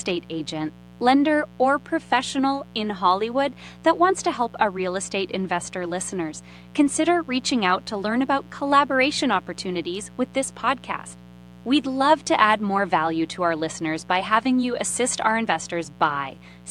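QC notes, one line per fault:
Throughout: mains buzz, a steady raspy buzz sitting under the speech at roughly 25 dB below it. Sharp switching spikes leak in twice per 60 Hz cycle, so the harmonics stack up from 120 Hz into the kilohertz range, giving that edgy, rasping character rather than a pure hum.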